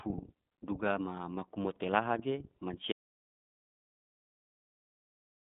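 From the start, the speech carries iLBC codec damage that is plainly audible. The codec treats each short frame on its own, and the slightly rough, synthetic texture fits 30 ms frames at a rate consistent with 13.33 kbps. The line band runs from about 150 Hz to 3.6 kHz, and nothing passes above 3.7 kHz. On a spectrogram, the energy stops sharply at that ceiling, with a bare region above it and thin low-frequency content below 150 Hz.

At 2.92 s, an audio dropout to silence begins and lasts to the end of the clip. The sound cuts off mid-flow into silence with no room tone left, so whatever followed is lost. The likely cause is that the input was lost, from a disconnected device, a failed link or a mute, while recording continued writing silence. The waveform collapses to a flat line, and the spectrogram turns uniformly blank from that point.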